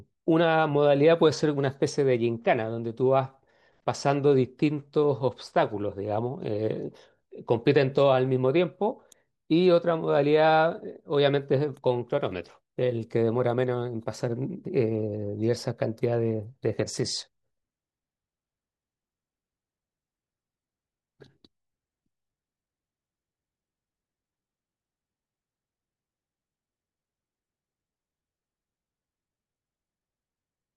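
No technical faults can be heard anywhere in this recording.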